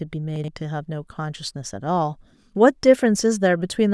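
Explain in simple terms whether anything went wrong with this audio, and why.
Something went wrong between 0.36 and 0.48 s: a case of chunks out of order. One 40 ms slice of the recording arrived late and was played two slices after where it belonged. Nothing is missing, but the pieces in that short stretch come in the wrong sequence, with three abrupt joins between them. To the ear, the speech sounds briefly scrambled for about a tenth of a second.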